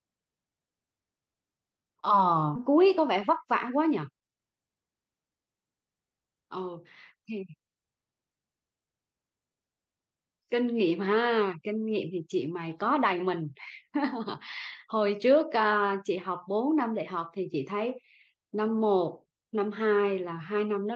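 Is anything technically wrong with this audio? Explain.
Yes, there are two related glitches in this speech clip.

At 2.55 s there's a skip ahead: about 0.7 s of audio got dropped, probably by an overflowing jitter buffer with later packets already queued. Playback jumps straight across with no gap, so the speech just lurches forward mid-flow.

From 2.70 to 4.51 s you get a jitter buffer speed-up. The buffer was still holding more audio than it wanted, so it kept trimming tiny pitch-period slices, around 150 ms in total. The speech runs about 7% fast at unchanged pitch and sounds slightly rushed.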